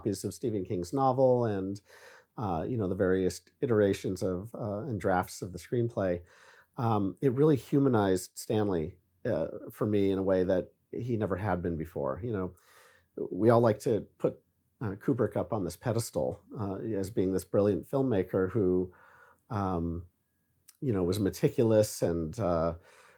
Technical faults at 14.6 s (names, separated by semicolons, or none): none